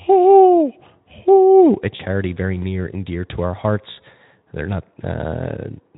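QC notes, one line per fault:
1.95 to 2.01 s and 3.91 to 3.99 s, VoIP packet loss concealed by the speech codec: packets drop out and the Speex decoder fills the 40 ms and 60 ms gaps by stretching its last pitch and filter with falling gain. That's why you hear short buzzy or noisy, smeared fades where speech should continue.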